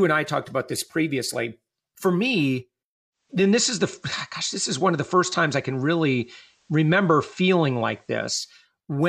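Speech, with digital radio blending to analogue from 3.11 s to 8.68 s: the receiver lost the digital stream and cross-faded in 386 ms to the FM broadcast, shifting level about 1 dB and adding faint hiss roughly 40 dB down.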